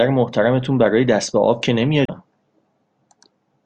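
Short speech clip with one real problem: damaged data in a compressed stream, from about 2.05 to 2.10 s. For roughly 40 ms you get a quick glitch where the decoder hits frames it can't make sense of, because bytes were lost, zeroed, overwritten or mixed with other data. It loses sync and has to hunt for the next valid frame header before it can lock back on and carry on decoding.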